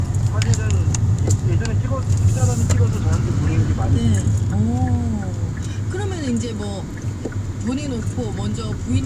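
No technical faults are audible.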